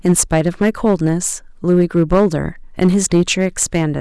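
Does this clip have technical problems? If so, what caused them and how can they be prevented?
Yes. Hard clipping runs through the whole speech clip: the signal was driven about 7 dB beyond what some stage in the chain could pass, so its peaks were sliced flat at the ceiling. Only a small share of samples, around 2 percent, hit that limit, but each flattened peak adds high harmonics, heard as crackle and rasp on the louder syllables. To prevent it, set input gain so peaks sit well below full scale.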